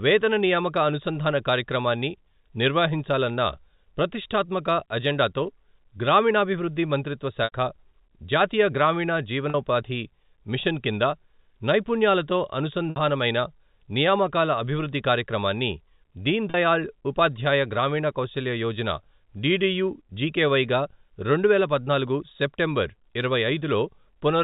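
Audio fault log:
7.44 s, 9.50 s, 12.90 s, 16.50 s: packet loss with pitch repetition. The 40 ms gaps are brief, slightly held buzzy tones; the 60 ms and 80 ms ones fade into silence before speech returns with a short cross-fade. At 7.44 s (after "ప్రతిష్ఠాత్మక అజెండాతో గ్రామీణాభివృద్ధి మంత్రిత్వ") it lasts 80 ms, at 9.50 s (after "జాతీయ గ్రామీణ") 40 ms, at 12.90 s 60 ms, and at 16.50 s (before "ఉపాధ్యాయ గ్రామీణ కౌశల్య యోజన") 40 ms. The receiver replays the last pitch period across each missing stretch in the telephone-band speech, and the spacing fits 20 ms packets.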